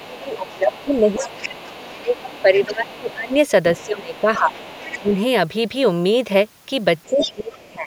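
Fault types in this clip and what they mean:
Other side's voice leaking through: A fainter second voice runs beneath the talker from the start to 3.35 s and from 3.77 to 5.14 s, about 20 dB down, then louder, about 10 dB down, at 7.04 to 7.31 s. It is likely loudspeaker echo the canceller missed. A spectrogram shows weak overlapping harmonic stripes, and the waveform shows low-level energy filling pauses.
Speech suppressed in double talk: Where both voices overlap, the talker's level drops in pieces by about 15 to 20 dB up to 5.12 s, and by about 30 dB from 7.06 s to the end. The likely cause is the canceller turning everything down. The waveform shows abrupt notches in the envelope, and the spectrogram shows the upper bands thinning or vanishing.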